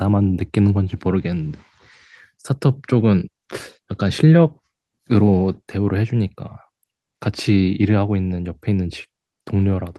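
Nothing in this recording of speech stands out as a technical fault, so there's nothing to flag from one moment to the next.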